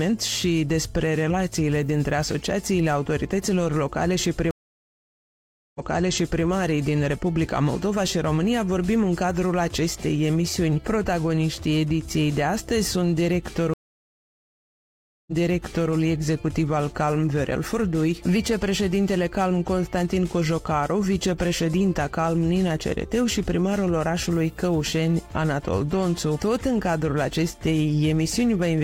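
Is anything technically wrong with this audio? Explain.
Yes. Two stream reconnects occur, at 4.51–6.44 s and 13.74–15.92 s. The connection drops and the player falls silent for 1.24 s and then 1.54 s. A fresh decoder restarts, and the server's resent burst makes the audio repeat from about 0.70 s and 0.65 s earlier. On a waveform or spectrogram each reconnect appears as a flat blank gap, followed by a short fade-in and a repeated stretch of the preceding material.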